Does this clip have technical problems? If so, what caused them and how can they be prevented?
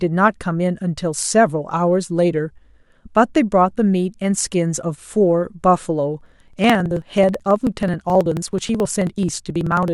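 Yes. From about 6.21 s to 9.88 s the speech picks up a steady run of ticks, evenly spaced every 54 ms, which is dozens of them. Those are periodic USB or driver dropouts: something keeps stalling the bus or audio driver on a fixed cycle, and each time roughly 10 ms of audio simply gets skipped, so the waveform jumps and clicks. To prevent it, track down the background task or power-saving feature hitting the USB bus and give the interface a larger buffer.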